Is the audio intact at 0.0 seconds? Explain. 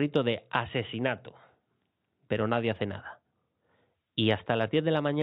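Yes, the audio is intact at 0.0 seconds, with no fault at that moment.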